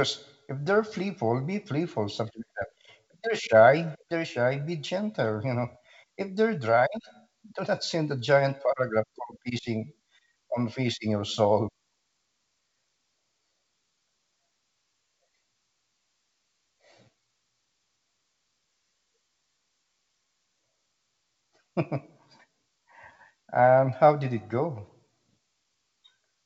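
Nothing's technically wrong with this speech recording; it sounds like ordinary G.722 wideband telephone coding doing its job, with the audio reaching up to around 7 kHz and nothing in it that calls for a fix.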